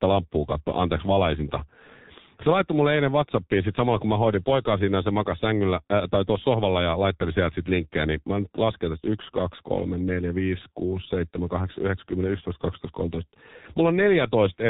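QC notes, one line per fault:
Throughout, G.723.1 codec: the speech is muffled and hoarse, with nothing above 3.8 kHz and smeared consonants, because the codec rebuilds the voice from a coarse model in 30 ms frames and updates it slowly; the heavy damage points to roughly 6 kbit/s.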